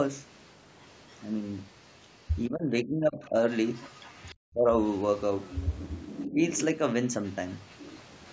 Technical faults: other side's voice leaking through; speech suppressed in double talk

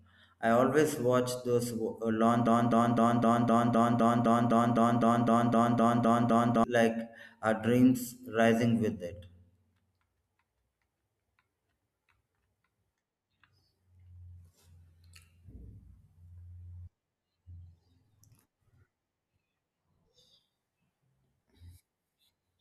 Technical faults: broken-record loop

